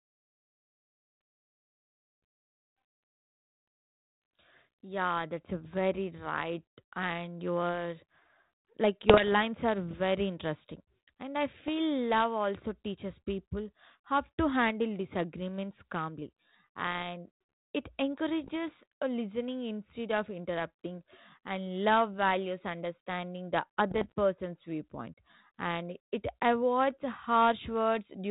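Bit errors on an ADPCM link hit the speech at 9.08–9.35 s, 11.60–11.69 s, 18.44–18.51 s and 23.90–24.12 s. They sound like pops and rough bursts with brief level jumps. Unlike clean clicks or dropouts, each error throws off the decoder's step size and prediction, so the roughness rings on briefly.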